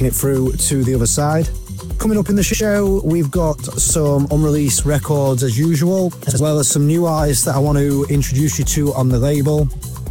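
Brief garbled flutters interrupt the audio at 2.46–2.61 s, 3.79–3.94 s and 6.29–6.40 s: frames out of order. In each, two adjacent blocks of about 70 ms (46 ms in the last) play swapped, so nothing is lost, only scrambled.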